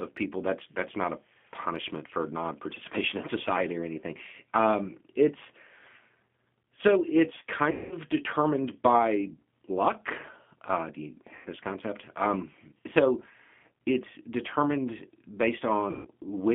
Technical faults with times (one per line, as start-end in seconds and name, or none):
0.00-16.54 G.729 codec
7.71-7.95 VoIP packet loss concealed by the speech codec
11.35-11.47 VoIP packet loss concealed by the speech codec
15.91-16.07 VoIP packet loss concealed by the speech codec